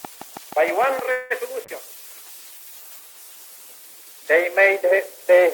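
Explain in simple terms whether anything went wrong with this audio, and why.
Three things went wrong. From 0.05 to 1.0 s there is a train of clicks. Something was most likely injecting short electrical pulses, such as interference from nearby equipment or a faulty connection or power supply. You hear about seven near-identical ticks, evenly spaced at roughly six per second. They poke out above the sound itself, as a steady tapping laid over the top.

From 1.11 to 1.32 s comes a call audio freeze. The network likely held back a batch of audio packets, and the receiving end ran out of sound to play. It stretched the last moment of audio into a fading buzz or hiss for about 0.19 s. Once the packets arrived, playback picked up exactly where it stopped. Nothing was lost, but everything after that point now runs about 0.19 s late.

From 1.65 to 4.84 s there is a call bitrate drop. The call decided it had much less bandwidth and told the encoder to squeeze the audio into a small fraction of its usual data. 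With so little to work with, the encoder describes the sound more crudely and discards the higher frequencies. The result is audio that turns rough, watery or muffled, and it is at its worst for about 1.6 s within that stretch.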